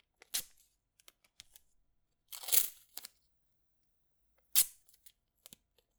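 Pre-emphasis left on from 2.52 to 5.08 s: a treble boost matching the 50 µs FM curve was never undone, leaving 10 kHz about 11 dB hot, so the sound turns thin, bright and hissy.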